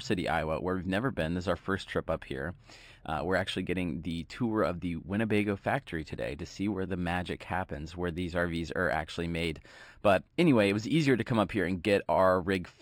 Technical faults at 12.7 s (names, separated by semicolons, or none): imaging from linear upsampling